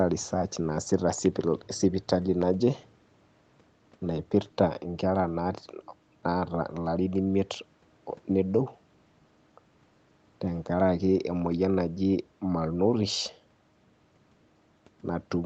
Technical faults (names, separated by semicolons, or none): none